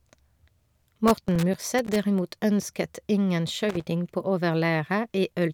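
Speech with loose connector crackle in two irregular bursts, from 1.08 to 1.96 s and again from 3.69 to 3.85 s. A worn or dirty contact is making and breaking as it shifts. That chops the signal into scratchy fragments, and any DC on the line adds pops.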